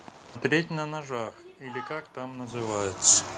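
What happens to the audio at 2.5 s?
Two faults overlap at that moment. The first is the automatic gain rising, which runs from 1.58 s to 3.05 s. The input level fell by about 13 dB. The gain control answers by raising its gain slowly, by about 6 dB. The voice and the room noise swell together. The rise is smooth, with no sudden step.

The second is a jitter buffer speed-up, from 2.36 s to 2.85 s. The receiver held more audio than it wanted, so it trimmed short pieces of one or a few pitch periods, one after another. Around 50 ms is taken out in total. The speech plays at about 110% speed while the pitch stays the same. Through that half second it sounds hurried.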